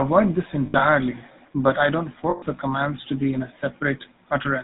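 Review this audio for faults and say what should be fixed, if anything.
The whole clip has plainly audible GSM full-rate codec damage. Pulse-driven vocal-tract modelling makes the speech buzzy and gravelly, with nothing above 4 kHz. Use a wideband codec.

Lost GSM frames occur at 0.66–0.88 s, scattered, with the longest gap around 70 ms. They occur again at 2.30–2.43 s. Each repeats the last good frame as a metallic ring. Add error protection or packet-loss concealment.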